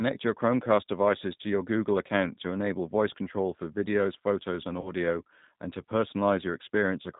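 G.729 codec damage runs throughout: speech sounds slightly rough and synthetic, with nothing above 4 kHz, as the decoder rebuilds each 10 ms frame from a filter, pitch and few pulses, fitting 8 kbit/s. VoIP packet loss concealed by the speech codec follows from 4.81 to 4.93 s: about 40 ms went missing, likely two packets, and the decoder stretched its last frame into a fading sound that stays weakened briefly afterwards.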